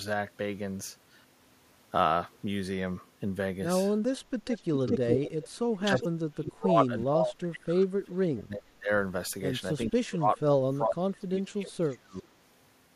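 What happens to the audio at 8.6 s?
From 8.39 to 8.9 s the speech is hit by speech suppressed in double talk, likely an echo canceller ducking it as echo while the far end talked. Level dips by about 30 dB; the waveform envelope sags and the spectrogram fades across that half-second.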